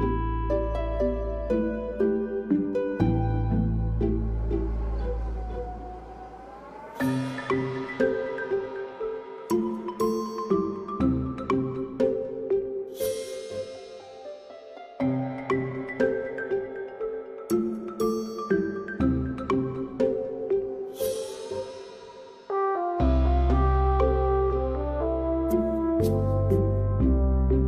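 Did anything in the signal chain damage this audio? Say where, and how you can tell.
No, nothing in the chain, from capture through to playback, has left an audible mark on this audio.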